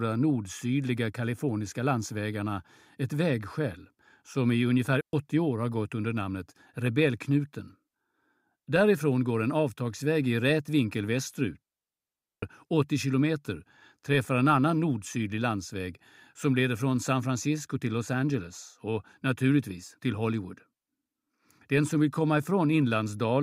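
At 5.01 s the speech drops out for about 0.12 s. At 11.62 s it drops again, for 0.8 s, until 12.42 s. Both are digital wireless dropouts. The receiver lost too much data and muted with a very short fade. Each leaves a clean, near-silent hole, with no noise burst either side.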